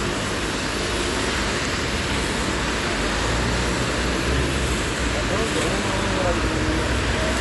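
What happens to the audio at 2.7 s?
At 2.7 s the audio shows the damage of a starved perceptual encoder, likely Dolby Digital compression. The damage runs through the whole clip, not just this moment. With too few bits, which fits a rate near 64 kbps, the encoder dropped everything above 11.4 kHz and left many frequency lines without real detail, so they were refilled with noise on playback. The sound is plainly dull, with a rough, fluttering grain around tonal parts.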